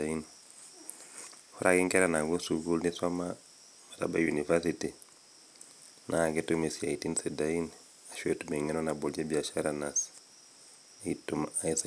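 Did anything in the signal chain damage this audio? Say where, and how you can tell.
No, nothing I can hear in this speech points to damage at any stage of the chain, from capture through to playback.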